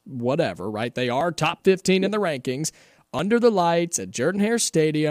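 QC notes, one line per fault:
1.21 s and 3.19 s: overlap between stream segments. Two tiny skips 2 s apart fit 2-second segments. Overlapping time stamps made the player trim real audio, dropping 8 ms, then 5 ms (between "in the rankings" and "the lights"), so the waveform jumps.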